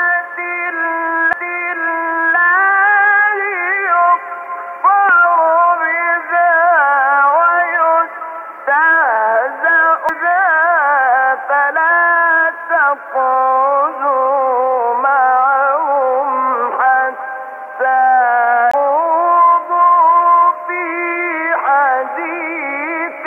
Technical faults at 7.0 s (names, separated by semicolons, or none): none